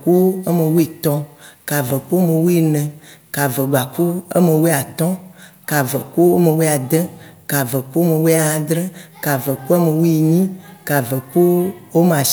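Speech recording; no technical faults can be heard anywhere.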